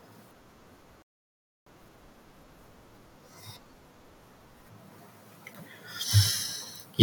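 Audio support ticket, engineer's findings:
Rebuffering stall, 1.02–1.66 s: speech cuts to dead silence, then resumes exactly where it stopped; no content lost, about 0.64 s added. Playback buffer underrun, player starved of downloaded audio. Waveform: flat near-silent gap. Spectrogram: clean blank vertical band.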